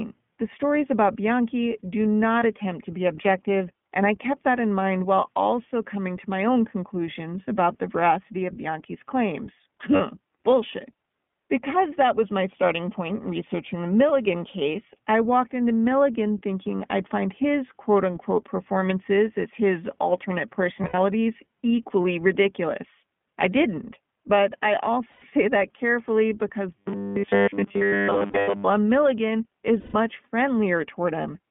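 The whole clip runs through the iLBC codec at 15.2 kbps on a 150 Hz to 3.4 kHz phone line, so there's no top end at all. The damage is plainly audible: the speech is clear but rough and a bit synthetic, since each 20 ms frame is coded on its own.

You'll catch lost iLBC frames at 2.40 s, just before "attempt to be objective", then at 9.96 s, 20.82 to 20.98 s right after "performances as his alternate", 25.12 to 25.25 s before "that carefully because", 28.28 to 28.49 s, and 29.80 to 29.95 s. The decoder fills each gap by repeating the last pitch cycle with some noise, so you hear a short held, buzzy vowel. The first is a single 20 ms frame, the 9.96 s drop is 40 ms, and the others run 100 to 140 ms. At 20.82 s and 28.28 s the losses are scattered, with the longest stretch around 70 ms. Because each frame stands alone, the voice snaps back almost immediately.

From 26.78 to 28.64 s there's robotic sound from repeated short buffers, a stiff metallic buzz at 100 Hz that only loosely follows the speech. 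Nearly everything in that stretch is repeated material. The likely cause is audio arriving too slowly, so the last chunk keeps looping, which fits a 10 ms buffer.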